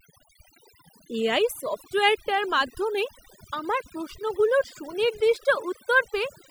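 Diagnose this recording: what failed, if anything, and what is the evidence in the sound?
The failure is in call processing: overdone noise removal, running through the whole clip. Listen to the gaps between phrases. The room sound drops away, but little twinkling specks keep popping in and out. The noise suppressor is cranked too hard, so any frequency band that sits close to its noise estimate gets pulled way down or shut off, and the softer parts of the speech disappear along with the noise.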